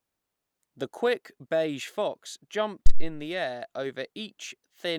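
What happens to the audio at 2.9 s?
A phantom power thump hits from 2.86 to 3.11 s, between "quick beige fox" and "the air". Switching the supply sends a voltage step through the coupling capacitors, giving a deep thud peaking near -5 dBFS that dies in 57 ms. Unlike a plosive pop, it doesn't follow the speech.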